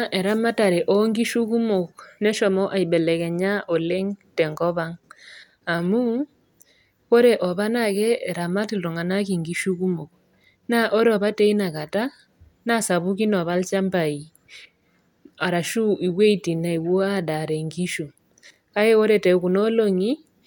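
No technical faults are audible.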